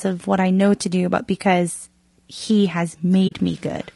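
From start to finish the speech carries plainly audible low-delay AAC compression damage, likely from AAC-ELD at a low rate, with a sound that fits roughly 32 kbps. Voiced sounds come across rough and grainy, with noise filling the gaps between harmonics and a high band that sounds thin and partly synthetic.

At 3.27 s the audio fades out, and it returns by 3.33 s. This is AAC frame loss with muting. The decoder received nothing for those frames and zeroed their spectrum. The loss amounts to about 40 ms, consistent with two missing frames. Because the codec's overlapping windows taper the signal down and back up, the gap has soft edges. It sounds like a brief hole in the sound rather than a hard cut.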